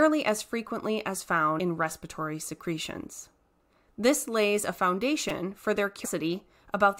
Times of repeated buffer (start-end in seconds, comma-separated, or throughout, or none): 0.68, 5.29